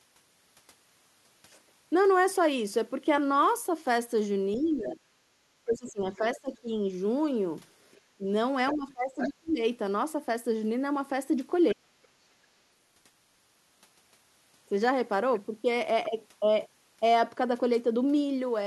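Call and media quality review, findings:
Speech suppressed in double talk: the talker's speech dips and drops out in pieces at 4.56–6.74 s, 8.16–9.6 s and 11.73–11.85 s, around 40 dB at worst. Likely the echo canceller, unable to separate near-end speech from the loudspeaker echo during overlap, attenuating both.

Other side's voice leaking through: second-voice scraps at 4.85–4.91, 5.78–6.36, 7.92–7.98, 8.71–9.29 and 11.69–11.75 s, roughly 10 to 35 dB below the talker. Likely residual loudspeaker echo left in the microphone signal by incomplete echo cancellation.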